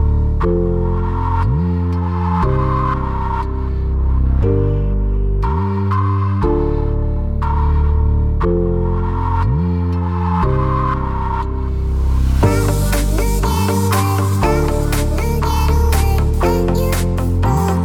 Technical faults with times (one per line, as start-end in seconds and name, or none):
none